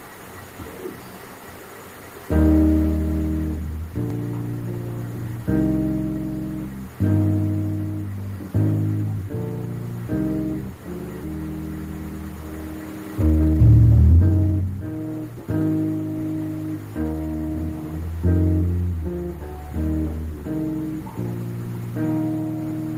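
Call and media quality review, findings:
Jitter buffer speed-up, 13.23–15.70 s: audio hurried, pitch unchanged, running at 130% speed, roughly 0.7 s trimmed. Receiver jitter buffer draining excess after a delayed packet burst, cutting pitch-period-sized pieces repeatedly. Waveform: periodic cycles dropped at splices. Spectrogram: compressed timing, harmonics stay flat.

Jitter buffer speed-up, 16.99–18.02 s: milder repeat at 118%, about 0.2 s removed. Same buffer catching up on excess backlog. Spectrogram shows tighter spacing, no pitch shift.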